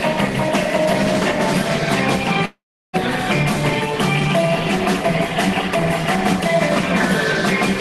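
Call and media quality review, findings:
Long network dropout, 2.45–2.95 s: roughly 0.5 s of audio lost; fading buzz from concealment, then about 0.35 s of near-silence before sound resumes mid-stream, likely a jitter buffer underrun after packet loss. Unlike brief loss glitches, concealment runs out and goes silent.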